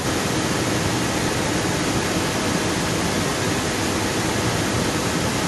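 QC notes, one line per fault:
0.04 s to end: echo leak, a distinct copy of the speech about as loud as the original, 258 ms behind it, unlike reverb's smooth tail; likely an incompletely cancelled loudspeaker return.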